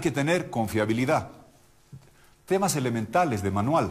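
No technical faults are audible.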